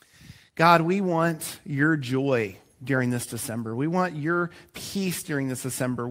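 Nothing in the recording stood out as a technical problem on listening.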